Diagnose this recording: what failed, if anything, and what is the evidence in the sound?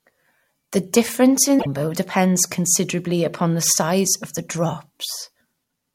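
Damaged data in a compressed stream, at the codec stage: from 1.56 to 1.67 s the speech is briefly disrupted where misread frames decode as garbage.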